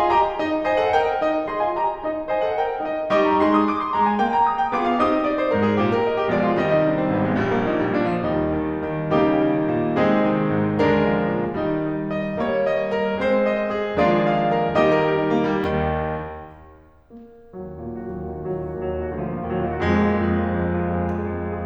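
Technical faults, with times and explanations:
Nothing technical to flag here: the music runs along without a single fault turning up at any point.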